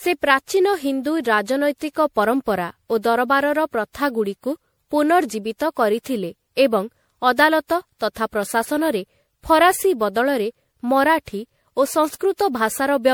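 Throughout, the speech has generation loss: swirly, hollow smearing with blurred consonant attacks, likely from about seven MP3 re-encodes, which sounds worse than a single pass at the apparent 96 kbit/s.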